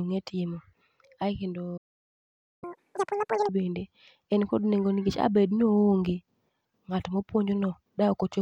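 At 1.77 s the speech just drops out, and nothing comes back until 2.64 s, a gap of about 0.85 s. That's a playback stall: the player most likely ran dry of data or had its thread held up, so output went silent mid-flow.

Right after, from 2.64 to 3.49 s, there's catch-up at higher speed. The player rushes through the backlog at double speed, so the speech sounds chipmunky, pitched up around 10 semitones, before settling back to normal just ahead of "bende en kod".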